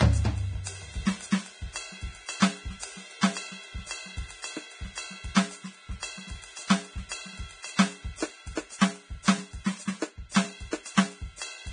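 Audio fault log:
throughout: Vorbis compression. The music has nothing above 9.7 kHz, and the remaining treble is hissy and grainy, with roughened tones and smeared attacks. The likely cause is heavy Vorbis coding at a bitrate near 23 kbps, quantising the treble so coarsely that fine detail turns to noise.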